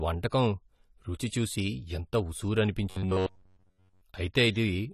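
Throughout the speech, the audio sounds dull and smeared, with a fizzy, warbling edge on sibilants, likely from AAC compression at a low bitrate, which fits AAC-LC near 32 kbps. A spectrogram shows a hard ceiling at 14.1 kHz.

From 2.90 to 4.02 s, the speech turns into a rigid metallic buzz pitched at 93.8 Hz, robotic sound from repeated short buffers. It is likely caused by a buffer of about 10.7 ms being replayed over most of this stretch. On a spectrogram this appears as evenly spaced horizontal harmonic lines, and the waveform shows a repeating identical cycle.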